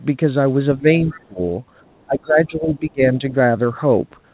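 At 0.77 to 0.88 s, 1.05 to 1.4 s and 2.06 to 3.22 s the speech sinks by roughly 10, 20 and 25 dB, for about a tenth of a second, a third of a second and a full second. This is speech suppressed in double talk, likely the echo canceller ducking the talker while the far end speaks. Within the second dip, from 1.1 to 1.25 s, a faint second voice about 25 dB below the speech comes through. This is the other side's voice leaking through, likely residual loudspeaker echo the canceller missed. It is heard as a separate talker rather than as a reverberant tail of the main speech.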